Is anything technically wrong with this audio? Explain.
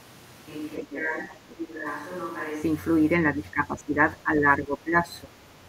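Yes. There are two kinds of fault.

From the very start to 2.61 s, the speech sounds like a switch to a distant microphone. It is already under way when the clip begins. The voice is roomy and hollow, with thin bass. It sits roughly 10 dB lower than afterwards. Room noise sits only about 25 dB below the speech. The likely cause is a failed close microphone, with a farther one picking up instead. At 2.61 s the sound snaps back to close and full.

Four times the speech is suppressed in double talk: 0.8 to 1.85 s, 3.35 to 3.97 s, 4.17 to 5.08 s, and 5.24 to 5.55 s. In each stretch the voice dips by up to about 10 dB. The likely cause is an echo canceller hearing both sides at once. It cannot separate the talker from the loudspeaker echo, so it turns everything down.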